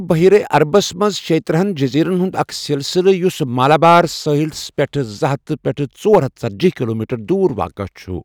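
A harsh, gritty crackle rides on the louder parts of the speech from 0.11 to 1.06 s, again from 3.63 to 4.00 s, and in a brief burst from 6.13 to 6.18 s. This is hard clipping. In each stretch the signal is driven about 5 dB past what the stage can pass, so the peaks are sliced flat. Those squared-off tops throw energy into high harmonics, which is the crackle heard on the peaks.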